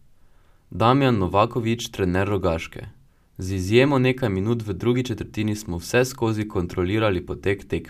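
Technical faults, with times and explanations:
No technical faults are audible.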